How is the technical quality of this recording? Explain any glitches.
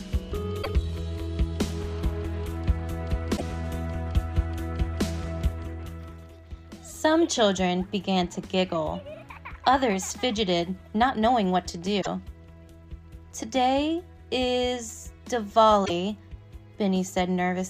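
The recording is marred by four brief glitches, all damaged data in a compressed stream, at 0.59 to 0.67 s, 3.33 to 3.42 s, 11.98 to 12.07 s and 15.82 to 15.90 s. At each point, corrupted bytes in the encoded file leave the decoder unable to read those frames correctly, so it loses sync and hunts for the next valid frame header. The result is a short, harsh chirp or blip lasting under a tenth of a second before the sound resumes.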